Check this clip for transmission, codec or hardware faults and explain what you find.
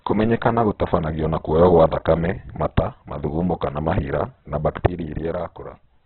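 Heavy codec damage runs through the whole clip, most likely from Opus compression at a very low rate. From start to finish, nothing sits above about 4.4 kHz, so the speech is narrowband and muffled. With too few bits, the encoder keeps each band's energy but fills the fine detail with noise, so tones turn noisy, rough and grainy. The damage points to roughly 8 kbps in the music (CELT) mode. A spectrogram shows a hard ceiling near 4.4 kHz with smeared, noisy harmonics below it.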